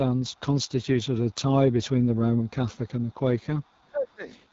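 The whole clip runs through the AMR wideband (HD Voice) codec at 8.85 kbit/s, so the speech sounds rough and raspy, with nothing above 7.5 kHz. A faint echo leak, around 40 dB down and trailing by about 480 ms, shows up at 0.16–0.69 s and 1.03–1.31 s, likely from a speakerphone whose echo canceller let some of its pickup through. Right after that, at 1.31–1.39 s and again at 1.81–2.15 s, the talker dips by roughly 15 dB. That's speech suppressed in double talk, likely the canceller ducking everything while both sides overlap. More echo comes at 2.39–2.5 s and 3.0–3.14 s. Then a longer suppression from 3.31 to 4.23 s pulls the voice down by roughly 20 dB, with one last echo scrap at 3.62–3.88 s.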